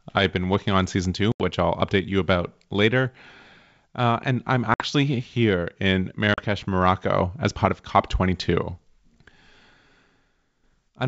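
Packet loss on an ADPCM call cuts hard-edged silent gaps at 1.32, 4.74 and 6.34 s, after "working on season two", "and I'm" and "here in", roughly 80, 60 and 40 ms long. On a waveform, flat holes; on a spectrogram, blank vertical slots. The decoder's predictor then restarts mismatched, so speech returns with brief distortion.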